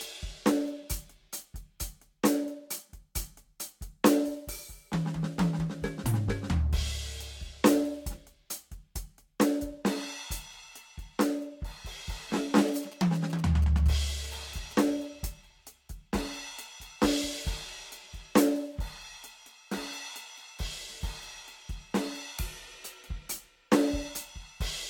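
A music clip with two technical faults. Throughout, the sound is swirly and hollow, transients are smeared rather than crisp, and nothing is present above 19.3 kHz. That degradation is heavier than a single lossy pass at this quality would cause, so the likely cause is generation loss. The audio appears to have been decoded and re-encoded around four times with a Vorbis-type codec, and the result fits a stream of roughly 68 kbit/s. Each pass quantises again on a shifted frame grid, so spectral holes and coding noise add up. From 12.68 s to 14.82 s there are GSM signalling bursts: a galloping dit-dit-dit of short buzzes at about 217 Hz, sitting about 20 dB below the music. This comes from a nearby 2G phone exchanging signalling bursts with the network. The audio circuitry rectifies that RF energy, and the burst envelope ends up in the signal path.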